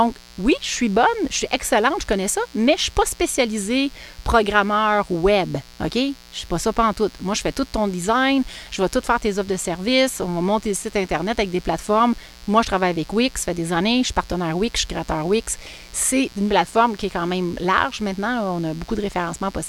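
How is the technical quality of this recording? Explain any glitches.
The recording carries a steady, raspy mains buzz under the speech for its whole length, sitting roughly 25 dB below the voice. Switching spikes from a dimmer, rectifier or poor shielding repeat twice per 60 Hz cycle, stacking harmonics of 60 Hz up into the kilohertz range.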